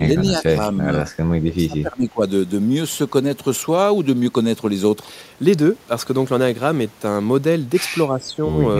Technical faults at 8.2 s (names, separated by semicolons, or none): speech suppressed in double talk